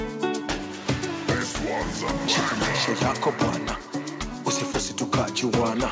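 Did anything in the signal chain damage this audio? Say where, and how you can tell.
No, nothing in the chain seems to have hurt it; it went through a WebRTC call path working as it should, and the band stops at 8 kHz, which fits a wideband call codec like G.722.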